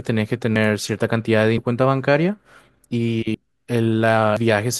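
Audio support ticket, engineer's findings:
Speech, four skip-aheads at 0.56 s, 1.58 s, 3.34 s and 4.37 s. No gap of silence, just a jump where the audio is spliced straight across. Likely a dropped buffer (overrun) on capture: app didn't drain the input buffer in time, hardware overwrote it. First loss is about a tenth of a second, the rest a few tenths each.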